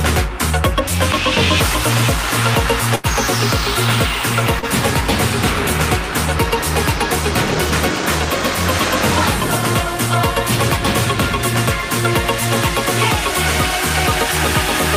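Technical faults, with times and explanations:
2.95–3.06 s, burst of packet loss: a run of packets arrived too late or never arrived, leaving the receiver 80 ms to fill. It extended the last sound while fading it, heard as a held buzz or fading hiss, then jumped ahead past 80 ms of lost audio.
4.59–4.66 s, short concealed packet loss: packets missed the decoder, leaving about 31 ms to fill. It filled the gap by continuing the preceding sound, either from its pitch or as shaped noise, then blended back in. This produces a brief smear, with 40 ms of real audio gone.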